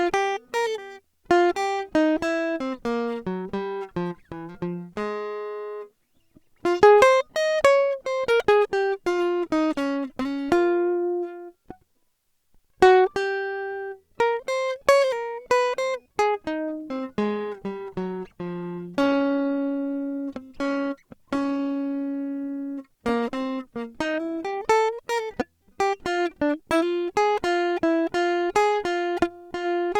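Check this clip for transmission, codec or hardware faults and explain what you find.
One transmission fault is present in this music clip. From 16.67 s to 24.67 s, an adaptive stream switches to a lower bitrate. The connection slowed, so a leaner version played. Quality drops suddenly, with no gap. This fits a change from 64 to 24 kbit/s Opus.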